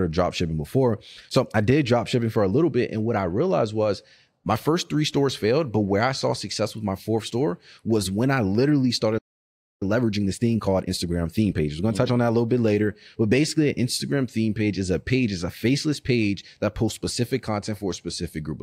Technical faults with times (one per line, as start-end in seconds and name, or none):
9.18-9.82 playback stall
9.82-12.32 time-compressed catch-up